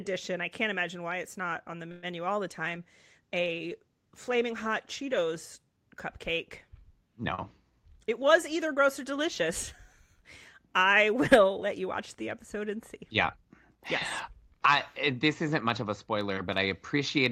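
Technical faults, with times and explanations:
1.91–2.06 s, call audio freeze: a fading buzz fills about 114 ms, likely from late packets emptying the jitter buffer. It shows as a smeared, decaying band on the spectrogram, and the sound then resumes with nothing lost.
2.51–6.58 s, call bitrate drop: coding falls from 48 to 18 kbps, lowest for about 2.75 s, so the sound turns rough and muffled. The spectrogram's upper frequencies vanish.
7.70–9.45 s, jitter buffer speed-up: repeated removal of pitch periods trims about a tenth of a second. The sound runs at 105% with unchanged pitch, and the waveform looks slightly compressed in time.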